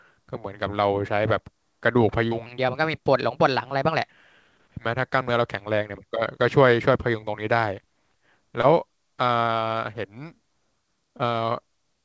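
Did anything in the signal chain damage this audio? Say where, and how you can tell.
Yes. Three short concealed packet losses show up at the network and jitter-buffer stage of the call path, at 2.28 to 2.33 s, 8.61 to 8.65 s and 11.17 to 11.21 s. Each is a brief smear or wobble. Roughly 20 to 40 ms of audio arrived too late to decode. The receiver extended the preceding sound to fill each hole, then faded back into real audio. The sound around each gap is band-limited to about 7 kHz, which fits a G.722 call.

A section at the wrong speed runs from 2.46 to 4.10 s, just after the first gap. The audio plays 1.16 times fast, and pitch rises by about three semitones along with tempo. The speech turns higher and hurried, then drops back to normal. Speed and pitch moving together point to a resampling or clock mismatch. The likely cause is a playback or editing stage running at the wrong rate for this stretch.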